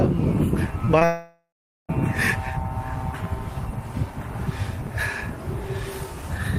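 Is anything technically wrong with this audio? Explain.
Yes. At 0.85 to 0.89 s and again at 0.99 to 1.03 s there are brief smears, where the sound wobbles for an instant. This is short concealed packet loss: about 20 ms went missing each time, and the receiver papered over the gap by extending the preceding sound before blending back.

From 1.05 to 1.91 s the sound turns into a fading buzz or hiss that gives way to nearly half a second of silence, then resumes with roughly 0.84 s of material gone. The likely cause is a long network dropout, with concealment stretching the last sound until it ran out.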